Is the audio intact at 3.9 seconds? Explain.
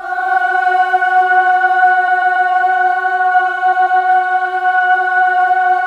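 No. Repeated frames occur from 3.72 to 4.00 s. A 139 ms block of compressed audio plays twice more, adding 279 ms and causing a stutter.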